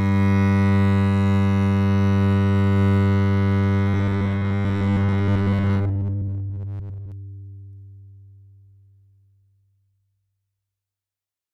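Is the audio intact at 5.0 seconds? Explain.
No. At 5.0 seconds the music sits inside a stretch of robotic sound from repeated short buffers, running from about 3.88 to 7.12 s. It has a rigid, metallic buzz near 100 Hz, with the music only loosely traceable underneath. The likely cause is audio arriving too slowly, so the playback repeats a short fragment for most of that span while real audio is skipped. A 100 Hz buzz fits a repeated chunk about 10 ms long.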